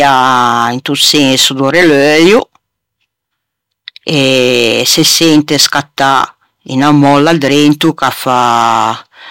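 Throughout the speech, louder syllables carry a harsh, crackling fuzz: hard clipping, the signal driven about 9 dB past the limit, flattening peaks on a small share of samples.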